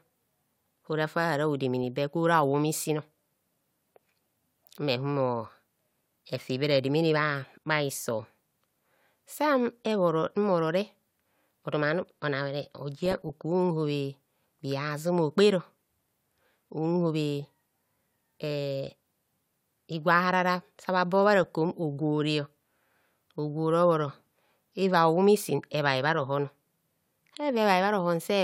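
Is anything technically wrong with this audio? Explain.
Yes, DAB burbling at 6.72–6.76 s after "efi be", 13.06–13.41 s and 21.44–21.46 s: residual bit errors corrupt MP2 sub-band samples and scale factors, making short blips of noise in single sub-bands over the speech.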